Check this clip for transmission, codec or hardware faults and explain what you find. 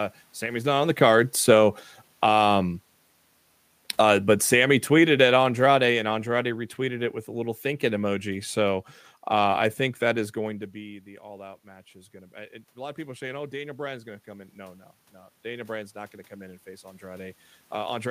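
The faults are gain-control ones, not codec or transmission damage: the automatic gain control pumps the level down twice and then back up twice.

Automatic gain falling, from 0.05 to 2.4 s and 3.81 to 7.09 s (ending just before "with a little thinking"): the control judged the input too loud, or its background noise too strong, and reduced its gain by about 9 dB, then about 6 dB. The voice and room noise sink together, which shows as a tapering envelope on the waveform and fading spectrogram energy.

Automatic gain rising, from 10.54 to 14.88 s (just after "I think that is") and 15.44 to 17.46 s: the talker moved away around 10.5 s, dropping the input by about 17 dB. The control then lifted the gain by about 6 dB and about 4 dB, so voice and background swell together. The waveform envelope and the noise floor both climb gradually.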